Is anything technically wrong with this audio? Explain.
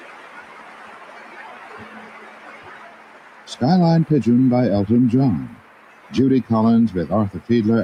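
Yes. Throughout, the sound pumps and thins, with held material and tails sinking while attacks punch through, a level swing of around 20 dB. A speech-tuned noise suppressor was left running, treating steady tones and ambience as noise and pulling them down.

From 2.95 to 3.47 s and again from 5.61 to 6.04 s, the sound dips by up to about 4 dB. Here the noise suppressor mistook this sound for noise and cut it harder than its surroundings.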